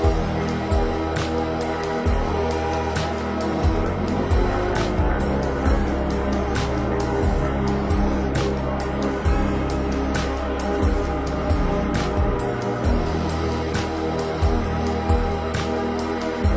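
From start to finish the audio sounds slowed, heavy and dropped in pitch, running at about 0.73 times its proper speed and roughly 5.6 semitones low. This is a wrong sample rate fault: the ratio fits material recorded at 22 kHz but played back at 16 kHz, with no conversion in between.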